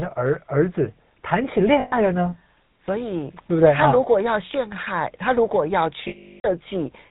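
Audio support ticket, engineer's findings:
GSM full-rate codec damage, whole clip: buzzy, gravelly speech. Vocal-tract model driven by decimated pulse excitation, consistent with 13 kbps GSM. Spectrogram shows a hard ceiling at 4 kHz with coarse, regularly striated harmonics below.

Lost GSM frames, 1.80–1.96 s and 6.08–6.46 s: rough metallic ring where the decoder repeats the last good frame (about 120 ms, then 360 ms). Spectrogram shows frozen, smeared bands. Waveform shows the longer one cut to silence after about a third of a second.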